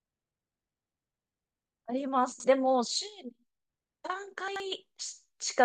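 Chunks out of order at 2.32 to 2.44 s and again at 4.48 to 4.60 s: each time a 40 ms chunk of speech plays two chunks late, after the two that should follow it. Nothing is lost, but there are three hard joins and the moment sounds briefly garbled.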